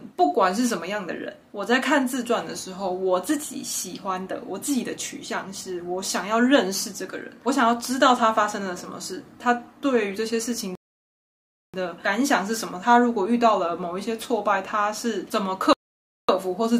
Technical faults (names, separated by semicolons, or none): rebuffering stall